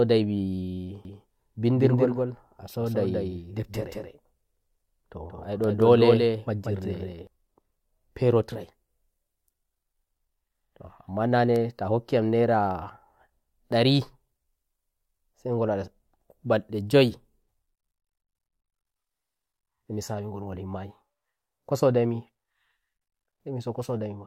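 From 1.05 to 7.27 s the speech carries a doubled audio track: a second copy trails about a fifth of a second behind, a few dB quieter, likely from a slower capture path. It starts and stops abruptly.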